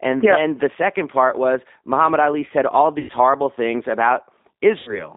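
Throughout the speech, the G.729 codec shapes the sound. The line band runs from about 200 Hz to 3.7 kHz, so the speech sounds thin and boxed in, and the codec damage is plainly audible as a rough, slightly synthetic grain. That fits an 8 kbit/s G.729A coder, which rebuilds each 10 ms frame from a vocal tract filter, a pitch predictor and a handful of pulses rather than sending the waveform itself.

VoIP packet loss concealed by the speech codec occurs twice. The first runs from 2.99 to 3.12 s, right after "said all" and before "horrible things". About 100 ms of audio is missing, which points to five lost packets. The decoder fills the gap by extending its last pitch and filter settings at falling gain, producing a stretched sound that fades. Because each frame depends on the one before, the speech stays weak or distorted past the gap. The second loss runs from 4.79 to 5.12 s, where about 80 ms is missing, consistent with four packets. 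It shows the same fading concealment, followed by a recovery that lasts into the clip's final moments.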